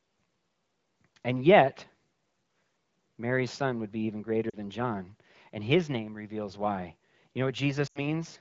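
Lost AMR speech frames at 4.49 to 4.56 s, just after "would be even greater", and at 7.87 to 8.06 s: the decoder reuses the last good pitch and vocal tract settings with fading gain, so the sound drops to near silence within two frames instead of cutting off cleanly as a plain dropout would.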